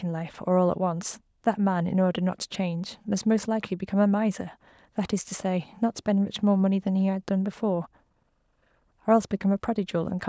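Speech with no technical faults to report. It has passed through a call's microphone processing, which trims the lowest bass and leaves nothing above 8 kHz.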